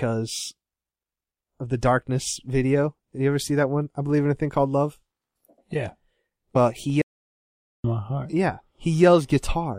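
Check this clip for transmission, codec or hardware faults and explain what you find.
Two faults are audible in this speech clip.

At 6.55 s, compressed frames are skipped: roughly four frames of about 26.1 ms each, around a tenth of a second of audio, never play, so the speech jumps ahead with an abrupt discontinuity where the surviving frames join.

From 7.01 to 7.84 s, a playback stall cuts the output to silence for about 0.82 s mid-flow before the sound resumes, likely because the player ran short of data or its processing thread was held up.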